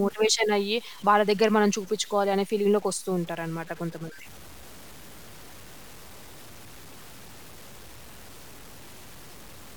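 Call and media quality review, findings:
Low bit depth without dither, throughout the speech. Grainy distortion that tracks the signal. Quiet syllables turn gritty. Decays sputter between steps or drop out. Error sits roughly 25 dB below the signal. Likely cause: truncation to about 7 bits in the capture or conversion stage, with no dither applied.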